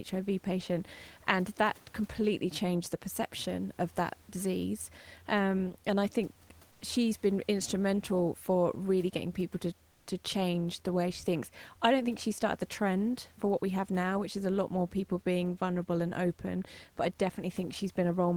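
At 9.91 to 10.03 s, after "really getting people to", comfort noise replaces the background. The room hiss turns flat and featureless, about 3 dB quieter. The likely cause is discontinuous transmission.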